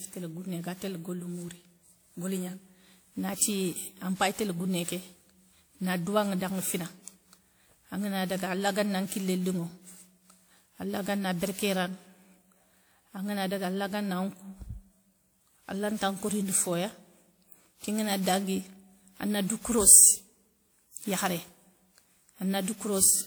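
Generation loss runs through the whole clip: the speech sounds swirly, smeared and hollow, with blurred attacks, despite content reaching 20.1 kHz. The texture fits WMA 1 at 96 kbit/s, likely re-encoded about ten times, each pass stacking fresh quantisation noise.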